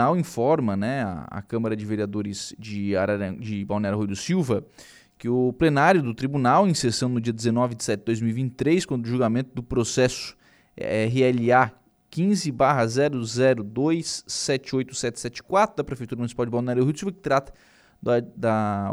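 No technical faults can be heard anywhere in the speech, which runs steadily without breaks, level jumps or added noise.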